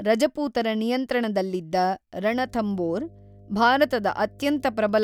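Mains hum begins at 2.29 s, just after "ರಜಪೂತರ ನಿಯಂತ್ರಣದಲ್ಲಿದ್ದ", and runs to the end of the clip. A steady 50 Hz tone sits under the speech, roughly 25 dB below it, with some low harmonics. The power line is leaking into the signal path, through a ground loop or a nearby transformer. Because the tone holds steady through pauses, it is most exposed in the gaps between phrases.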